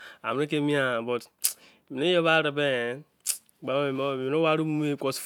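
No technical faults can be heard anywhere in this speech recording. The audio continues without a single event that calls for a timestamp or an explanation.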